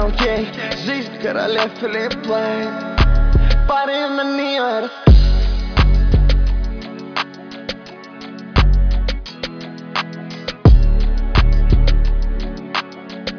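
No technical faults are audible.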